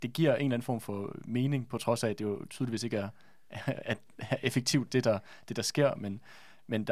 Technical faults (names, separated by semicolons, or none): none